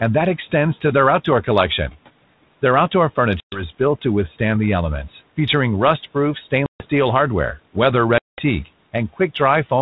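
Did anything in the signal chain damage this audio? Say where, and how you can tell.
Yes, there's packet loss on an ADPCM call, so it's a network-stage fault. Three hard-edged gaps fall at 3.40–3.64 s (just before "is built to"), 6.66–6.86 s (just before "steel hardware") and 8.18–8.41 s (right after "steel hardware"), with 120, 140 and 200 ms lost. The lost packets were filled with silence, and the G.726 decoder's adaptive predictor and step size fell out of step with the sender's. So each hole carries a short recovery stretch where the audio resettles.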